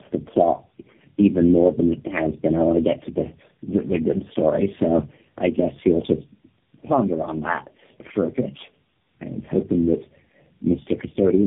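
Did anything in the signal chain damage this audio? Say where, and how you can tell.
Yes. The damage happened at the codec stage and runs through the whole clip. This is tandem speech coding. Nothing sounds above 3.6 kHz, and the speech is rough, muffled and warbly. Each coder re-encoded the previous one's degraded output, which fits four narrowband speech codecs in a row.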